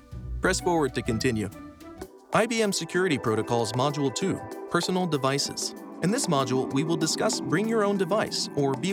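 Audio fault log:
No technical faults can be heard anywhere in this clip. Nothing in the sound calls for a timestamp or an entry in the log.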